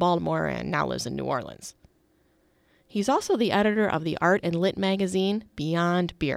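No technical faults can be heard anywhere in the speech.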